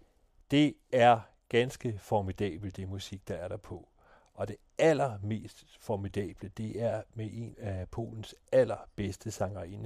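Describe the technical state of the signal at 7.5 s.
At 7.5 s the speech runs on cleanly, with no dropout, click, distortion or other fault to be heard at that moment.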